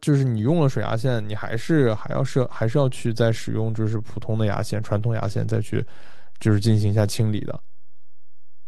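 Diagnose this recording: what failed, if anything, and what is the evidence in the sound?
A DC step at 0.5 s: a single low thump as the zero line shifts by about -27 dBFS and holds to the end, pointing to converter recalibration or an offset input.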